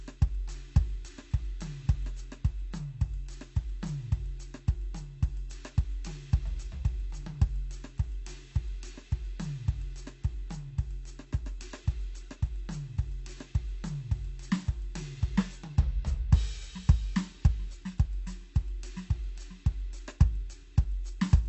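From start to finish the music carries plainly audible AAC compression damage. The top end is dull and smeared, and sustained tones have a warbling, fizzy texture. This is likely AAC-LC encoding, with the coder discarding and coarsely quantising spectral detail, at a rate that fits a bitrate around 32 kbps. On a spectrogram the high band stops at a lowered cut-off, with patchy holes and blocky smearing in the upper frequencies. The waveform shows little.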